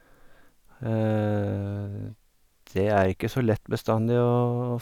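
No technical faults can be heard anywhere in the speech. At no point does the audio break, drop out or change in a way that points to a problem in the recording or playback chain.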